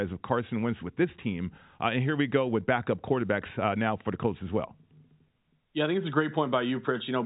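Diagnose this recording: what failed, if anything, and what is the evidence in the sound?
Nothing failed: the speech sits inside the roughly 4 kHz band of a G.711 telephone path, consistent with 64 kbps A-law coding, and its level-following quantisation hiss stays faint beneath the signal with no sign of a fault at any stage.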